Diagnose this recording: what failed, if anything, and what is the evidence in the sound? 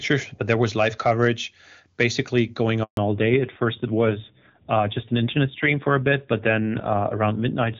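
The speech cuts to silence at 2.83 s for 140 ms, until 2.97 s. This is a handover gap at the network stage: no speech frames arrived while the call switched links.

From 2.97 s to the end, everything above 4 kHz is gone and the speech turns dull and rough. This is a fallback to narrowband at the codec stage, consistent with a low-rate narrowband AMR codec replacing the clean wideband HD Voice audio heard before the gap.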